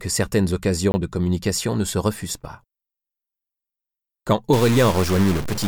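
A block of digital silence appears from 0.92 to 0.94 s: for 20 ms those samples were written as zeros. The audio cuts straight to silence and straight back with no fade. At this length it is heard as a short hole rather than a tick. From 4.53 s to the end, a stuck bit, likely caused by a broken data line or converter holding one bit at a fixed value, corrupts the samples. About half of the values are pushed off by that bit's weight, following the shape of the waveform. The sound is degraded, and the quieter passages fill with noise as the stuck bit flips with the sign of small values.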